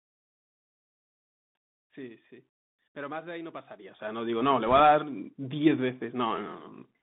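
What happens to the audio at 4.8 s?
Bit errors on a Bluetooth voice link run from 4.66 to 4.80 s, ending right at 4.8 s. Roughly one bit in a hundred and fifty is flipped on the CVSD headset link. Each flipped bit reverses the direction of a single step, no bit outweighs the others, and the error fades as the codec adapts, so there are no loud clicks. Instead the speech picks up a brief rushing, crackly noise.

Beneath it, the Bluetooth CVSD headset codec is plainly audible. Its one-bit, 64 kbps coding holds the sound to a narrow band of about 150 Hz to 3.7 kHz, adds a granular hiss and makes sibilants scratchy.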